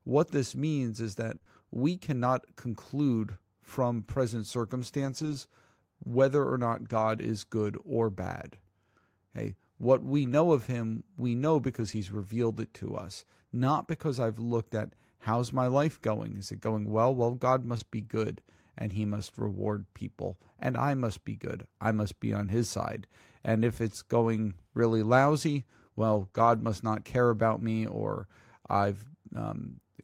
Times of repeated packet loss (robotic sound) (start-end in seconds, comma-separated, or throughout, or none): 1.35-1.48